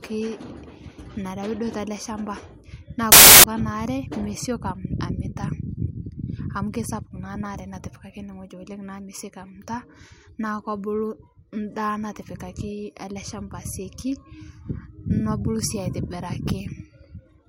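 From 3.12 to 3.44 s the speech becomes loud, harsh broadband noise: samples built from the wrong bytes. Each sample is misassembled, so fast-changing low bits dominate. Unlike an added noise burst, the noise comes from the speech samples themselves being read wrongly.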